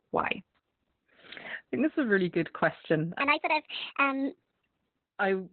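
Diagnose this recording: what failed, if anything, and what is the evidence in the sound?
Codec stage: the whole clip carries Opus voice compression at a setting that fits roughly 8 kbps in SILK narrowband mode. Nothing remains above 4.2 kHz, so the speech is muffled. The coarsely coded excitation makes it hoarse and slightly robotic.

Playback or editing stage: from 3.20 to 4.65 s a section runs at the wrong speed, 1.54 times too fast. Pitch rises by about seven semitones, so the speech turns high and hurried. The likely cause is that segment being resampled or clocked incorrectly.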